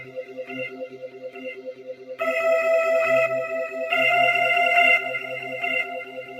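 A noise suppressor applied to these sounds is active from start to finish. Built for speech, it treats steady, sustained content as unwanted background and pulls it down, while sharper onsets get through. The gain it removes swings by around 15 dB, so the level pumps and flutters, and held or fading parts of the sound thin out between the stronger moments.

Sound cut by the noise suppressor occurs at three points. From 0.0 to 0.46 s, the opening sinks by about 10 dB. From 0.69 to 2.16 s, the deepest drop, about 12 dB, makes the sound sag. From 6.04 s to the end, the closing sound falls by about 9 dB.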